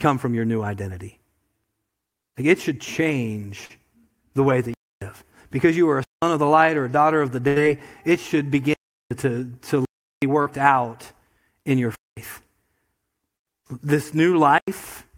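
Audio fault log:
3.65–3.71 s and 10.42–10.47 s, short concealed packet loss: about 40 ms of audio failed to arrive in time each time. The receiver extended the preceding sound and blended back, so each spot is a brief smear or wobble.
4.74–5.02 s (after "the way that"), 6.04–6.22, 8.74–9.11 (after "it should"), 9.85–10.22, 11.95–12.17, 13.38–13.47 and 14.58–14.68 s, block of digital silence: the output drops abruptly to silence for 93 to 372 ms, which fits unfilled buffers of 4096, 8192 and 16384 samples, leaving holes.
7.47–7.58 s, burst of packet loss: between "a daughter of the" and "it should", about 80 ms went missing in a row. The last sound was held and faded as a buzz or hiss, then the audio jumps ahead with that stretch gone.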